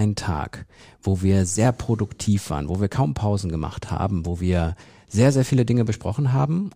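Listening to the speech here, nothing stood out as a technical problem at any point.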